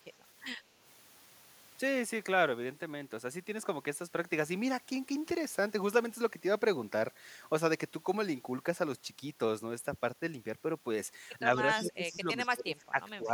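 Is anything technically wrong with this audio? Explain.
Yes. In the last two seconds of this speech clip, from 11.42 s to 13.31 s, the speech suppressed in double talk fault appears. The voice repeatedly dips, by as much as about 15 dB, for roughly a second and a half in total. This is likely an echo canceller that heard both sides at once, could not separate this talker from loudspeaker echo, and turned everything down. Unlike a network dropout, the level sags and recovers in pieces instead of falling to silence.

Within that same stretch there is also echo leak, heard as three brief scraps at 11.73 to 11.92 s, at 12.14 s and at 12.4 to 12.48 s. Each is a delayed copy of the voice arriving 111 ms late. The first is fairly audible, about 10 dB under the speech, and the later two are faint. The likely cause is a far-end speakerphone whose canceller let part of the returned sound through. 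A fixed delay of this length and the chopped fragments set it apart from room reverberation, which would trail smoothly.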